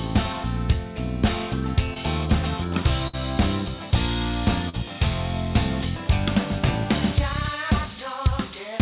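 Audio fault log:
1.94–1.97 s, short concealed packet loss: About 20 ms of the stream never arrived in time, so the receiver patched roughly 14 ms by stretching out whatever came just before, then cross-faded back into the real audio. It's a tiny smear or wobble.
3.07–3.15 s, burst of packet loss: This one's bigger. About 60 ms went missing in a row, and the receiver kept extending the last bit of sound for around 58 ms while fading it down. You get a brief held buzz or fading hiss, then the audio picks up further along with that chunk simply gone. Everything has that 4 kHz telephone-band ceiling too, which fits G.711 A-law at 64 kbps on the call path.
4.69–4.75 s, short concealed packet loss: Same mechanism as the first one, a bit longer. About 40 ms didn't make it, and roughly 42 ms of continued, blended-in sound covers the hole, so there's a short wobble instead of silence.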